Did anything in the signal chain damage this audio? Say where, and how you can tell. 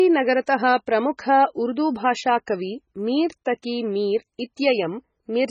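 Yes. Across the whole clip the speech sounds watery and swirly, with a metallic, chirping edge on s sounds and smeared consonant onsets, and nothing is present above about 9.4 kHz. This is likely MP3 compression in the codec stage, and heavy enough to fit a very low bitrate around 16 kbps. Starved of bits, the encoder cut the treble at a fixed frequency and zeroed weak frequency lines that flicker on and off from frame to frame.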